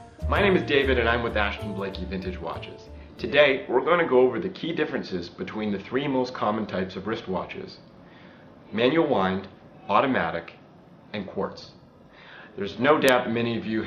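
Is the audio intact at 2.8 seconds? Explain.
Yes, the audio at 2.8 seconds is intact, with no dropout, click, distortion or other fault at that point.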